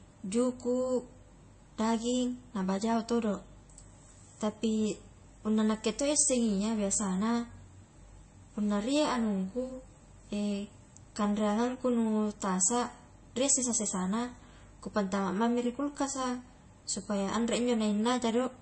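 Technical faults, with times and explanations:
Throughout, MP3 compression: nothing above 8.3 kHz, plus watery, swirling sibilants a plain low-pass filter wouldn't cause, likely from a starved encoder near 32 kbps.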